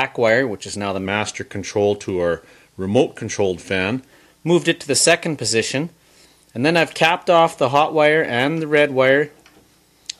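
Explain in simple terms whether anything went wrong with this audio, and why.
Wrong sample rate, from 1.05 to 4.05 s: the sound plays slightly slow and about 1.5 semitones low, which fits 48 kHz audio played back at 44.1 kHz.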